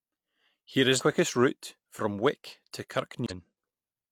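Compressed frames skipped at 0.96 s and again at 3.26 s: in each place whole frames of the coded speech were lost or refused by the decoder, so the audio leaps ahead by roughly 150 ms, the first just before "route from".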